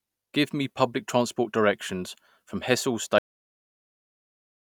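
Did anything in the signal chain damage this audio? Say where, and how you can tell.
Yes. A cut-off end at 3.18 s: the speech stops mid-sound and drops to digital silence with no decay, so the final buffers were never written to storage.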